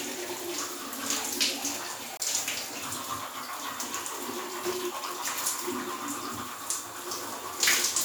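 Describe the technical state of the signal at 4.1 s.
At 4.1 s the signal is intact, with no dropout, clipping, glitch or other technical fault audible in the sound at that moment.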